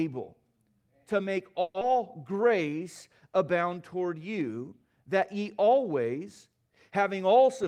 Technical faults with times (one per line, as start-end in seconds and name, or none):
1.61-1.83 long network dropout
2.32-2.85 jitter buffer slow-down